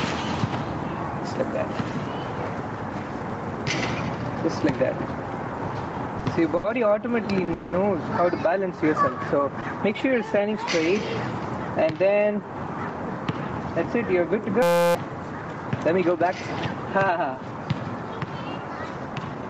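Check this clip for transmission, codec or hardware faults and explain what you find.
Several faults are present: gain pumping throughout, plus stalls, a freeze, a hang loop and a speed-up at specific moments. The audio carries nothing above 8 kHz, consistent with the call path's bandwidth.

Gain pumping, throughout: level swings of about 10 dB, likely from excessive gain and a fast limiter. On the waveform, the envelope looks flattened, with a rising noise floor between peaks.

Short stalls from late packets, at 6.57 s (70 ms), 7.45 s (30 ms) and 9.61 s (20 ms): the receiver held the last sound until delayed data arrived. Each one sounds like a brief smear, and shows on a spectrogram as frozen horizontal streaks.

Call audio freeze, 7.54–7.75 s: a 190 ms held buzz that fades, likely from packets delayed until the jitter buffer emptied. The audio then resumes where it stopped. On a spectrogram this appears as a stretched, smooth block.

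System hang loop, 14.62–14.95 s: a 5.8 ms fragment repeats about 56 times, fitting a 256-sample ring buffer. It produces a steady 172 Hz buzz, visible as rigid periodic waveform cycles and harmonic lines at multiples of 172 Hz.

Jitter buffer speed-up, 19.06–19.43 s: the receiver trimmed pitch periods to reduce delay, removing about 70 ms. The audio runs roughly 118% fast at unchanged pitch, with compressed timing visible on the waveform.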